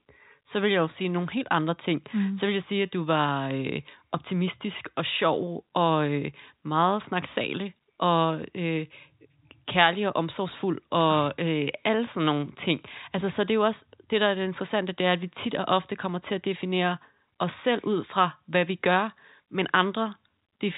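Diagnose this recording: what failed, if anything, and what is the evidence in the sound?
Nothing failed in this recording, and the sound gives no evidence of any fault.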